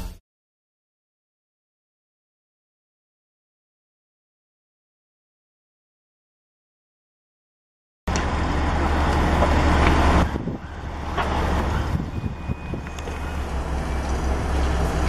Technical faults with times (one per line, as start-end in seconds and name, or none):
13.47-15.09 wrong sample rate